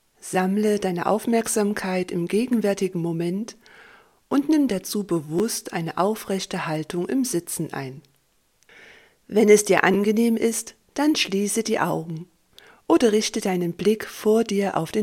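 Two brief repeated buffer faults occur, at 5.39 s and 9.94 s. At each point, a segment of about 12 ms plays twice in a row with a hard join, which fits a 512-sample buffer. At this size the repeat sounds like a click or very short buzz rather than a stutter. New audio did not reach the output in time, so the device played its last buffer again, and around 10 ms of audio is lost at each event.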